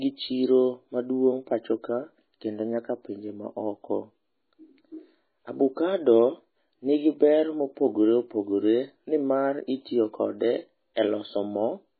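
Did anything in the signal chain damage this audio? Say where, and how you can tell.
Yes, at the codec stage, throughout the speech: heavy MP3 compression is the likely cause. Nothing survives above 4.5 kHz, so a spectrogram shows a flat ceiling there, with weak bands flickering on and off between frames. The watery, swirly texture fits a very low bitrate, around 16 kbps.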